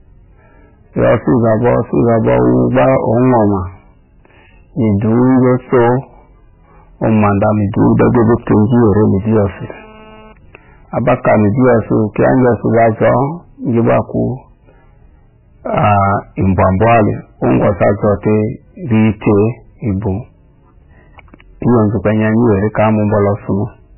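This is a speech clip with three faults. Hard clipping runs through the whole recording. The speech was driven about 19 dB past what a stage in the chain could pass, so every loud peak was cut flat. Roughly 15 percent of the waveform sits against that ceiling. The flat tops add harmonics high above the speech, and the result is a fuzz on every loud syllable rather than occasional crackle.

The clip also carries heavy coding damage throughout. Nothing remains above 3 kHz, so the speech sounds dull and boxed in. Weak spectral detail flickers on and off from moment to moment, giving a watery, swirly quality, and consonant attacks smear. The likely cause is MP3 compression at a very low bitrate, which fits something near 9 kbps. At that rate the encoder cuts the treble and drops whatever its hearing model ranks as least important.

From 8.06 to 10.33 s a GSM phone buzz joins the speech. It is a raspy tone at 217 Hz with many harmonics, and it has no connection to what is being said. 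It sits about 29 dB below the speech. A nearby 2G phone sends radio bursts 217 times a second, and the audio circuitry rectifies them into sound. Here the phone was moving data, so the buzz comes and goes instead of holding steady.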